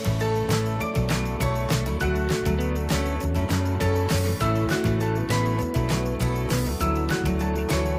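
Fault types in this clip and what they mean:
No fault types are present in this clip.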